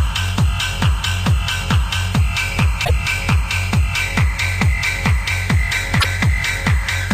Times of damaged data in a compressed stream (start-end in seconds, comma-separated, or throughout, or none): 2.81-2.90, 5.97-6.05